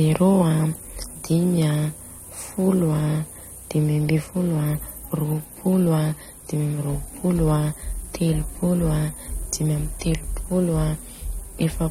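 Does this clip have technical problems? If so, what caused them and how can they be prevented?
Yes. AAC compression runs throughout the speech: the sound is dull and smeared, with nothing above 16 kHz and a warbling, fizzy texture on sibilants and sustained vowels. The likely cause is low-bitrate AAC-LC encoding, which fits a rate around 32 kbps. Short of bits, the encoder quantises each frame's frequency lines coarsely against its hearing model, drops the top band and leaves gaps or noise-filled bands that shift from frame to frame. To prevent it, encode at a higher bitrate, or keep a lossless master and compress only once at the final stage.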